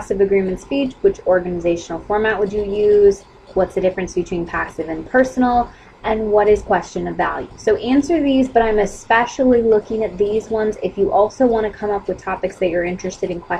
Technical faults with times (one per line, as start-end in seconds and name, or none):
none